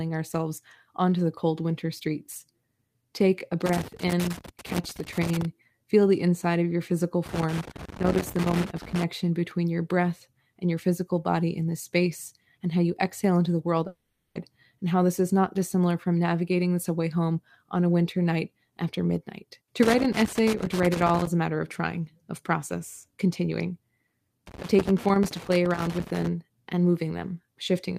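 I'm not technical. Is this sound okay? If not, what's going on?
No. Four bursts of irregular crackling and scratching cut through the speech, at 3.66 to 5.45 s, 7.26 to 9.04 s, 19.83 to 21.27 s and 24.47 to 26.27 s. This is loose connector crackle: a worn or dirty plug or socket keeps losing and regaining contact, chopping the sound into pops.

From 13.87 to 14.37 s, the speech turns into a smeared, fading buzz for half a second, then picks up again with that piece gone. This is likely a long network dropout: the audio stopped arriving and the player stretched out the last sound.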